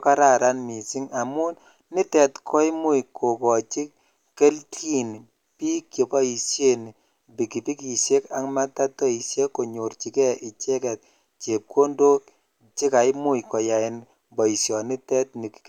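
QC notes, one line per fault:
No technical faults can be heard anywhere in the speech signal, and its level, continuity and frequency content stay steady throughout.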